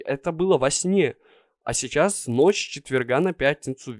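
From 2.04 s to the end, a 50 Hz buzz rides on the speech: the resampler restarted on every 20 ms block converting 48 kHz to 24 kHz, erring at each edge.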